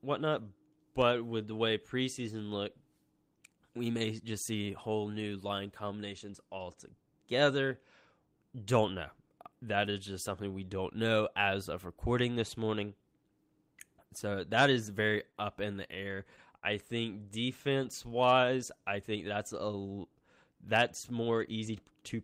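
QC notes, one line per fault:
15.31–15.36 s, short stall from a late packet: just before "up in the", one packet missed its playout time and the jitter buffer ran dry, so the receiver held the last sound for about 28 ms until the packet landed, then resumed from the same point. Nothing is lost, but that sound lingers a touch too long, and playback now runs 28 ms later than before.
15.94–16.64 s, repeated stalls (stutter): after "up in the", packets arrived late again and again, emptying the jitter buffer four times across this stretch. Each time the receiver extended the last sound to cover the gap, about 82 ms in all, the longest hold 49 ms, roughly an eighth of the span. No audio is missing, yet the speech drags and catches in small hitches rather than flowing.
17.45–18.82 s, jitter buffer slow-down: leading into "I think that's a", the buffer was short on reserve, so the receiver repeated individual pitch periods and slivers of pause many times over, inserting about 65 ms. 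Playback runs at 96% speed with the pitch unchanged, so the speech sounds slightly drawn out and unhurried, with syllables stretched a little longer than natural and perhaps a faint warble.
20.75–22.16 s, jitter buffer speed-up: the buffer had built up more audio than its target, so the receiver trimmed short chunks of one or a few pitch periods in quick succession, removing around a tenth of a second. Playback runs at roughly 106% speed with the pitch held steady, so this closing stretch sounds faintly rushed and compressed in timing, the syllables crowding together slightly.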